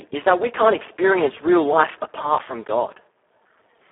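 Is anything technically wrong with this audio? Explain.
Yes. Speex codec damage runs throughout. The speech passed through a CELP coder with very few bits for the excitation, which fits a setting near 4 kbps. It sounds hoarse, noisy and robotic, confined to a 300 Hz to 3.4 kHz telephone band with nothing above 3.8 kHz.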